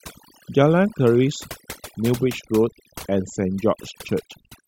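Overdone noise removal runs through the whole speech clip. A noise reduction stage was set far too strong. It cuts individual frequency bands whenever they sit near its noise estimate. Quiet parts of the voice vanish with them. Pauses fall to near silence with twinkling specks.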